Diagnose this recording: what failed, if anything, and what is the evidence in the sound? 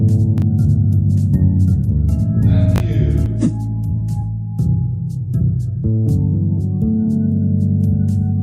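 A doubled audio track runs from the start until 3.26 s: an equally loud copy trails by about a second and cuts off abruptly with no decay, unlike a room echo. The likely cause is a second, slower capture path.

Chunks out of order at 0.38–0.42 s and 2.76–2.80 s: 20 ms blocks play one slot late in the buffer or storage stage, leaving a jumble but no missing audio, unlike a dropout.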